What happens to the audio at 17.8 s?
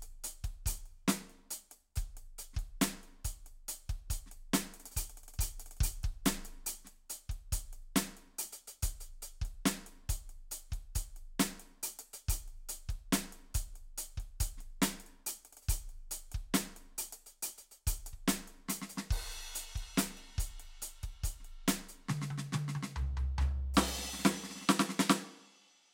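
Nothing goes wrong at 17.8 s; the music plays through that moment intact, with no dropout, click or other fault.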